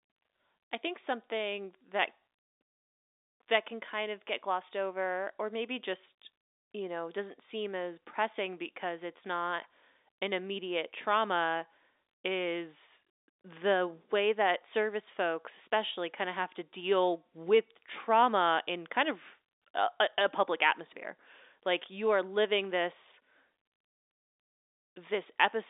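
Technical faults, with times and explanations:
Nothing faulty can be heard anywhere in this recording.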